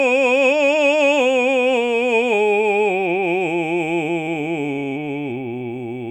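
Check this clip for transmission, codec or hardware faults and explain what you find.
Nothing to flag: the music shows no audible faults.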